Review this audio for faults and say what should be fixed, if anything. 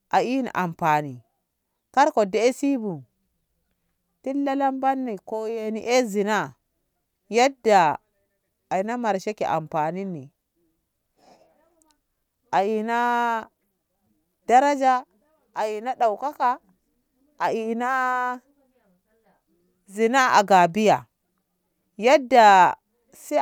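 No faults turn up in this audio, so nothing needs to be fixed.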